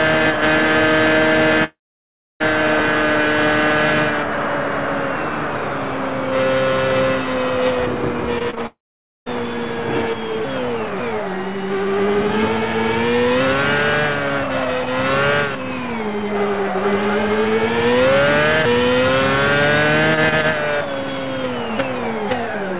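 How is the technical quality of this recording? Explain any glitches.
The technical quality suffers from two long gaps and a burst of tiny repairs, all heard through narrowband call audio with nothing above 4 kHz, consistent with G.711 A-law.

Long network dropouts, at 1.64 to 2.42 s and 8.66 to 9.28 s, were likely caused by the network delivering no packets for about 0.76 s and then 0.6 s. The receiver briefly stretches the last sound into a fading buzz or hiss, then leaves roughly 0.64 s and 0.51 s of silence before audio resumes with that stretch missing.

Short concealed packet loss hits at 8.39 to 8.42 s, 8.50 to 8.55 s and 8.55 to 8.58 s, just before the second dropout. Each time about 20 ms failed to reach the decoder, which patched the hole by extending the preceding sound, giving quick smears or wobbles.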